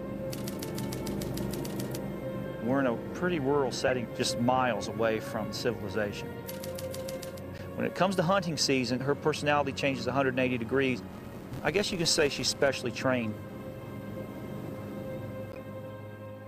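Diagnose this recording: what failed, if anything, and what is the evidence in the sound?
The codec stage failed three times: damaged compressed frames reached the decoder and were played as if intact. Flipped bits gave the decoder wrong gains and misread spectral codes, so each hit puts a short, out-of-place burst of energy at the wrong frequencies, lasting a couple of frames. These corrupt frame decodes are heard as chirp-like blips at 3.87 to 3.92 s (fairly prominent), 7.58 to 7.61 s and 15.52 to 15.57 s (both noticeably quieter).

A processing filter was restarted on every block from 11.10 to 12.68 s. Instead of carrying its internal state across block boundaries, it began each block from silence, so every block opens with a small transient. Those transients repeat at 172 Hz, which fits a 256-sample block, and are heard as a steady buzz riding on the sound. The buzz rises and falls with the level of the audio passing through the filter.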